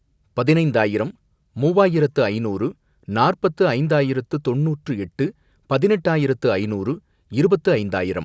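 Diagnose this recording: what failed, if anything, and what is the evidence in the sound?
Nothing failed in this speech recording, and no stage from the wiring through to playback leaves a fault in the sound. It shows the expected marks of call microphone processing: the lowest bass is trimmed and there is no content above 8 kHz.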